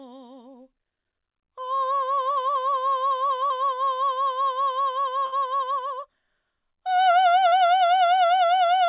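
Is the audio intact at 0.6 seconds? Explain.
Yes, the music at 0.6 seconds is intact, with nothing going wrong at that moment beyond the call path's normal narrowband sound, which has nothing above 4 kHz.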